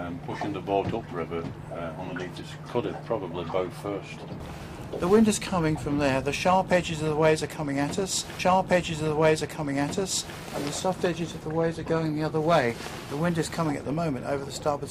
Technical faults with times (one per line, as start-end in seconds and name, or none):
8.38-10.38 stream segment repeated